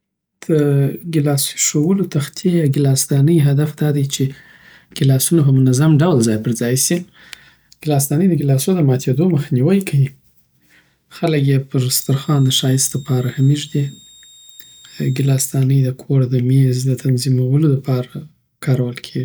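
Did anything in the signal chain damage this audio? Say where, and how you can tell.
Yes. A switching supply whistle runs from 12.00 to 15.34 s, a faint high tone near 3.7 kHz, drifting slightly, roughly 30 dB below the speech. In the analogue power stage, a switching supply is running in an audible burst mode or beating with another supply, coupling its whine into the signal.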